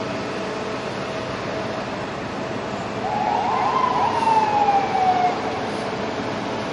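MP3 compression runs throughout this recording of sounds, with plainly audible codec damage that fits a bitrate around 64 kbps. The likely cause is an encoder short of bits, which lets weak frequency lines flicker between frames, leaving a watery, swirling texture.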